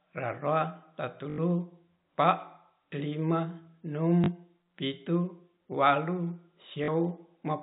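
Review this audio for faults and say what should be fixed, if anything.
Packet loss with last packet repeated at 1.30–1.38 s, 4.24–4.28 s and 6.84–6.88 s: gaps of 80, 40 and 40 ms are filled by replaying the previous chunk. This produces a robotic stutter with a buzz near 50 Hz, which fits 20 ms packets. Unlike a dropout, there is no silence. Better jitter buffering or proper loss concealment in the telephone-band G.711 link would prevent it.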